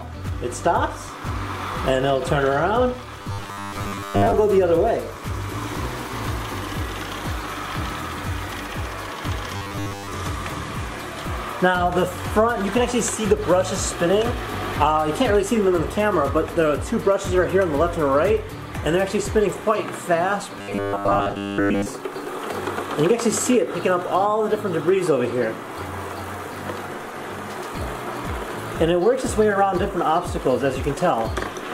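Robotic sound from repeated short buffers hits at 3.19–4.34 s, 9.56–10.11 s and 20.59–21.86 s, with a rigid 100 Hz buzz, likely from a 10 ms buffer being replayed for most of the time.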